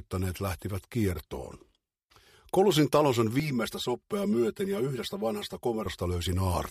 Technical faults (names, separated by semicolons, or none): channel delay (comb filtering)